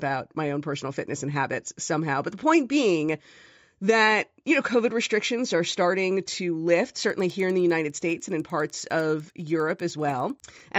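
From 7.0 to 10.6 s the speech carries a steady ticking at 10 per second, the mark of a resampler restarted on every block. Each block was converted on its own, so its edges were computed against silence rather than the neighbouring samples, which fits 100 ms blocks upsampled roughly threefold, likely from 16 kHz to 48 kHz. Unlike buffer underrun clicks, these ticks keep a strict rhythm, leave no gaps, and fade whenever the speech pauses.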